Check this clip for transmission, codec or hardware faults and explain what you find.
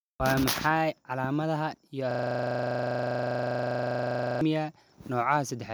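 One fault: a system hang loop. Right after "calaamadaha iyo", from 2.11 to 4.41 s, the speech stops and a rough, rattling buzz at 25 Hz takes over. The system froze while the hardware kept replaying the same 40 ms slice of its ring buffer, exactly and repeatedly.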